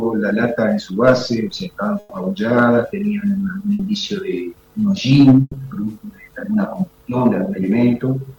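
Bursts of packet loss occur at 1.99–2.14 s, 3.73–3.82 s and 5.41–5.56 s. The receiver stretches the last received sound and fades it over 120 ms, 60 ms and 120 ms respectively, the third ending in 20 ms of silence, then resumes with that span missing.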